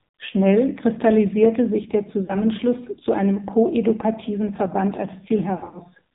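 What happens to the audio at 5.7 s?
Lost AMR speech frames hit between 5.58 and 5.79 s. Several narrowband frames failed their checksum, about 120 ms of sound in all, scattered over 160 ms with the longest run 40 ms. Each time the decoder repeated the last good pitch and vocal-tract settings at falling gain, so the speech dips and warbles in short stutters. Underneath, the AMR narrowband mobile codec is squeezing the signal hard, which fits its low 5.9 kbps rate. With nothing above 4 kHz, the voice sounds dull, buzzy and synthetic.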